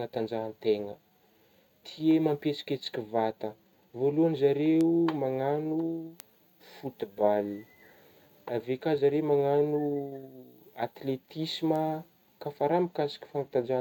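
Word clock ticks run from 0.64 s to 13.14 s: about ten clicks at a steady rate, roughly one every one and a half seconds. The receiver isn't locked to the sender's clock; drifting around 15 ppm apart, it drops or repeats one sample at each slip.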